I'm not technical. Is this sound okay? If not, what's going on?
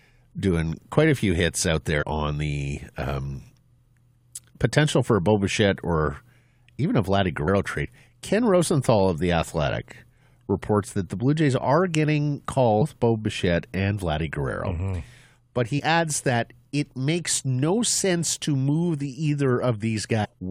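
No. Five tiny glitches from damaged data in a compressed stream: broken file bits make the player stumble at 2.01–2.03, 7.47, 12.81, 15.78–15.80 and 20.24–20.26 seconds.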